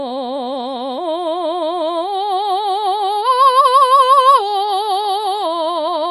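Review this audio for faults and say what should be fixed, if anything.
The encoder was likely starved of bits by MP3 compression at a low bitrate, around 48 kbps, and it coped by cutting off the treble and dropping the quieter frequency lines. Throughout the music, nothing remains above 11.5 kHz, so the top end sounds dull and closed in. The codec damage is plainly audible: detail swirls and turns watery as weak components flicker in and out, bright sounds pick up metallic chirps, and attacks lose their sharpness. Keep a lossless master, or encode at a much higher bitrate, so the encoder never has to discard this much.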